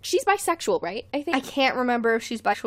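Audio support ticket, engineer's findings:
Damaged data in a compressed stream, two hits. Corrupt bytes in the encoded payload; the decoder misreads the affected frames, loses sync and hunts for the next valid frame header. Heard as short glitches in the speech. First at 1.31 s, right after "she's bisexual right I", a brief glitch. Second at 2.52–2.54 s, longer glitch near the end. Probable component: file storage or transport layer feeding the decoder.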